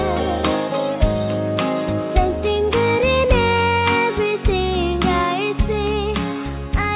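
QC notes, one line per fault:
No faults found.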